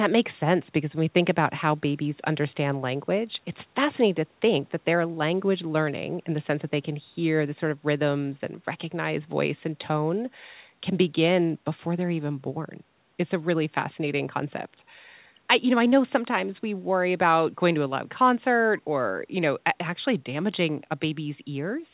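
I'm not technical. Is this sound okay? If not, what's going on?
Yes, nothing is wrong here: the speech has the narrow, phone-like sound of a standard call line, with nothing above about 4 kHz, which is normal for that kind of connection.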